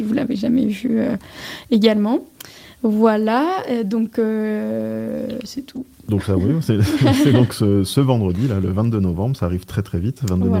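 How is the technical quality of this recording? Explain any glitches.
The technical quality of this recording is sound, with no glitches to explain.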